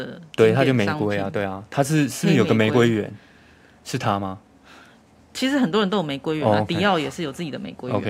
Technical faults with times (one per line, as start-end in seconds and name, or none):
0.00-5.67 sample clock jitter